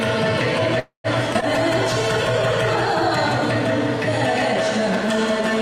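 At 0.79 s the audio stalls until 1.07 s. The last sound is stretched into a fading buzz or hiss, then about 120 ms of silence. This is a call audio freeze, likely from delayed packets draining the jitter buffer. Nothing is lost, but a quarter-second gap is inserted.

Two skip-ahead jumps follow, at 1.34 s and 1.41 s. Stretches of audio were dropped while later audio was already waiting. The first drops somewhat under a tenth of a second, the second about a tenth. Each seam joins almost directly, with no real gap.

From 1.41 s to 3.22 s a call bitrate drop sets in. The sound turns coarse and muffled, with the high frequencies trimmed away. That fits the encoder being squeezed from around 96 kbps to 20 kbps after the bandwidth estimate fell.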